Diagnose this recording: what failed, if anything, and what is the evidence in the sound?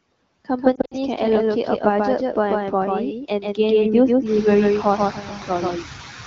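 At the call-processing or capture stage, a doubled audio track runs throughout. This is likely a second, slower capture path or an edit holding two copies out of step. A full-band copy at roughly equal level trails by about 150 ms, with no decay or room colour, giving a flat, stuttering echo.

Noise suppressor artifacts, also from call processing, run through the whole clip. The suppressor pulls bands it judges to be steady noise down by about 17 dB frame by frame. The background sinks in pauses and swells under speech, and the room noise rises by about 12 dB near 4.5 s.

Lost AMR speech frames occur on the radio link between 0.75 and 0.94 s. About 100 ms of audio is missing, scattered over 160 ms, which fits five lost 20 ms frames. The longest gap is 60 ms. The decoder repeated its last good parameters with falling gain, so the sound warbles, dips, and returns briefly rough. The AMR-WB coding itself sounds clean, consistent with a rate near 15.85 kbit/s.

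Speech cut by the noise suppressor happens at 3.24 to 3.59 s and again at 4.83 to 5.5 s. Mistaking speech for noise, the suppressor dropped it by as much as about 12 dB, for around 150 ms and nearly half a second respectively. Endings and soft consonants sound swallowed.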